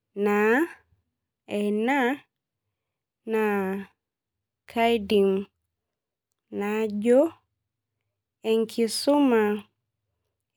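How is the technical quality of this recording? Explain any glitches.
The speech recording has no audible technical glitches anywhere in the signal.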